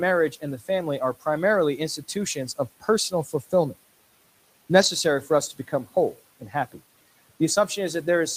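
From 3.1 to 3.53 s the noise suppressor cuts speech. It mistakes quiet parts of the speech for background, which sits about 21 dB below the speech, and pulls them down by up to about 10 dB. About a tenth of a second in total sounds swallowed and faint. Unlike a dropout, nothing goes silent.

At 4.81 to 4.87 s a lost packet is rebuilt from error correction. About 40 ms, which fits two lost packets, is played from the low-bitrate copies carried in the following packets. There is no gap. That span sounds rougher and noisier, rather than going quiet like concealment fading.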